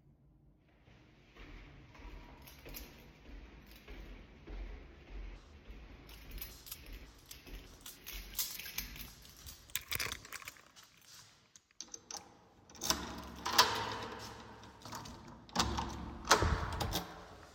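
From 14.04 s to the end at 17.54 s there is Wi-Fi interference: a nearby radio's beacon, every 102.4 ms, is picked up and rectified by the audio circuit. Beneath the sounds it comes through as a steady ticking about ten times a second, roughly 30 dB down.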